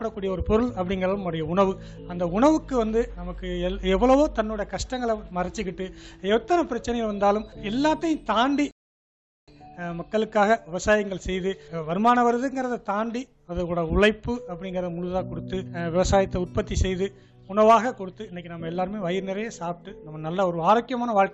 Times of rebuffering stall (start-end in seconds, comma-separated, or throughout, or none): 8.71-9.48